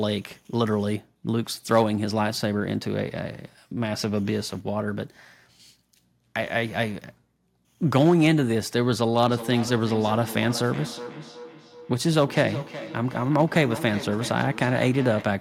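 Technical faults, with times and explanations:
9.28 s to 15.40 s, feedback echo between two devices: from 9.28 s to the end of the clip, the speech returns in delayed copies spaced at roughly 400 ms, the loudest about 13 dB below the direct speech. A second device in the same room is likely replaying this microphone's signal, which the microphone then picks up again. The echo canceller only removes its own device's playback, so the returning copy passes through.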